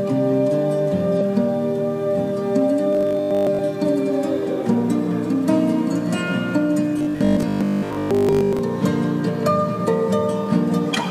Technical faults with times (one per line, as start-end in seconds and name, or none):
1.16-1.21 damaged data in a compressed stream
2.93-3.59 robotic sound from repeated short buffers
6.99-8.59 robotic sound from repeated short buffers